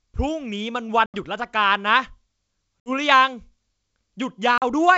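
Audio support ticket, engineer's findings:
Packet loss on an ADPCM call, 1.06–1.16 s, 2.80–2.90 s, 4.58–4.63 s: hard-edged silent gaps of about 80, 60 and 40 ms, a few packets each. Decoder's predictor and step size desync, giving slightly distorted speech on resumption. Wideband G.722 otherwise clean.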